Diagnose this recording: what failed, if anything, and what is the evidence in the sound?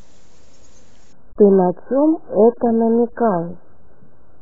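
The failure is in the network and codec stage: an adaptive stream at a lower bitrate. At 1.13 s the speech suddenly loses everything above 1.7 kHz and turns coarse and artefact-laden until the end, with no gap. The sound fits a switch from 96 to 8 kbit/s AAC. A plain low-pass filter would not add these artefacts.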